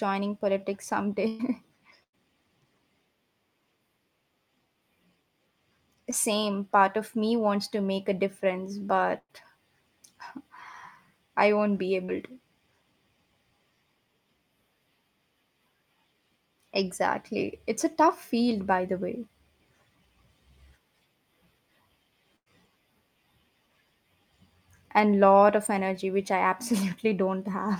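At 1.27 to 1.41 s and 2.03 to 2.15 s, bursts of packet loss drop about 0.1 s of speech each, which the receiver stretches into a held, fading sound before the speech jumps ahead. At 6.11 to 6.14 s, a short concealed packet loss of about 20 ms passes as only a brief smear. At 9.18 to 9.31 s, another burst ends in about 40 ms of silence. At 12.05 to 12.10 s, a second concealed loss of about 40 ms leaves a quick wobble. At 22.36 to 22.48 s, a final burst holds and fades again. The bursts are long enough to hear as a sustained fade with missing speech, while the short losses blend back in too quickly to sound like a gap.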